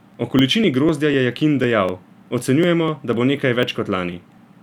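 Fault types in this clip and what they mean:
Periodic USB or driver dropouts: from 0.14 to 4.38 s, about a millisecond of speech skipped every 0.249 s, heard as regular ticks while sound plays.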